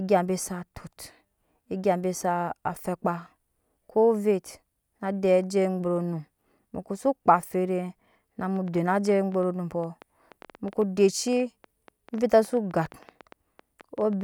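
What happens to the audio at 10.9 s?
At 10.9 s the speech sits inside a train of clicks running from 8.56 s to 14.22 s: about nine sharp, similar pulses per second at uneven spacing, roughly as loud as the speech, likely from electrical interference or a faulty connection or power supply. They show as thin vertical broadband lines on a spectrogram and needle-like spikes in the waveform.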